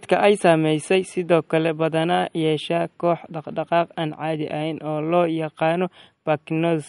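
Throughout the speech, MP3 compression is plainly audible: the treble stops dead at 11.2 kHz, and weak detail turns watery and swirly as faint frequency lines drop in and out between frames. A spectrogram shows a hard ceiling with flickering gaps beneath it, which likely points to a low bitrate near 51 kbps.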